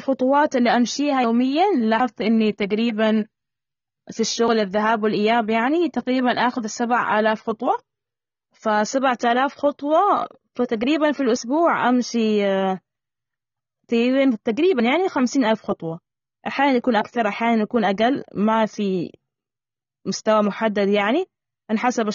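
From start to end, the speech carries AAC compression damage. Nothing sounds above about 6.9 kHz. Treble is missing, and sibilants sound fizzy and smeared. The codec likely ran at a low bitrate, which fits about 24 kbps.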